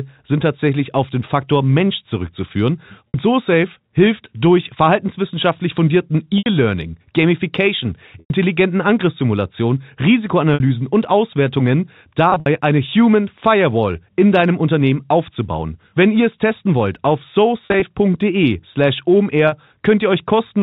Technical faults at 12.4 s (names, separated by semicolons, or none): packet loss with pitch repetition